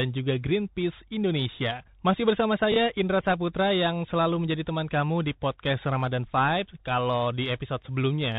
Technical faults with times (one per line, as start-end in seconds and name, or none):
0.00-8.39 Bluetooth CVSD headset codec